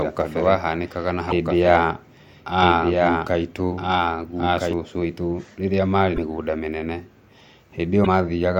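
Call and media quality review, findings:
Doubled audio track, 0.00 to 4.73 s, already present at start: full-band second copy of the speech about 1.5 s behind, about 5 dB down. Likely a second capture path or misaligned edit. Not acoustic echo: no decay, no room colour, copy ends abruptly at 4.73 s.

Broken MP3 bit reservoir, 1.29, 6.15 and 8.03 s: each a roughly 30 ms glitch with the audio skipping ahead, about one 26.1 ms frame. Likely MP3 frames dropped, with the next frame's back-reference reading wrong bytes. Not a plain dropout, which would leave silence without a burst or skip.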